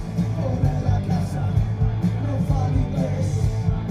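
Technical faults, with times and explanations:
No technical faults can be heard anywhere in the clip.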